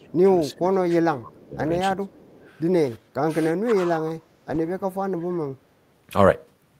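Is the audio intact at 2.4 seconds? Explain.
No. From 1.96 to 2.45 s the speech is suppressed in double talk. Both ends were likely talking at once, and the echo canceller turned down the near talker along with the echo. The level dips by as much as around 10 dB, for about 400 ms in total within that span, which shows as a shrunken waveform envelope.

An echo leak overlaps it from 2.08 to 2.54 s. Leftover loudspeaker sound likely got past the canceller and was sent back, so a very faint copy of the speech arrives 343 ms late, around 30 dB below it. On a spectrogram this appears as weak, delayed repeats of the harmonic pattern.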